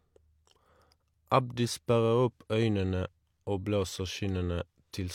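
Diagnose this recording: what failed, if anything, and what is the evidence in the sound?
Nothing in the signal chain failed here: the speech signal stays continuous and stable throughout, with no audible defect at any stage from capture to playback.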